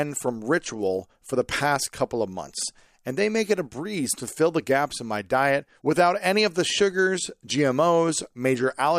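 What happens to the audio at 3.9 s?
Nothing goes wrong at 3.9 s; the speech carries on intact through that moment with no audible fault.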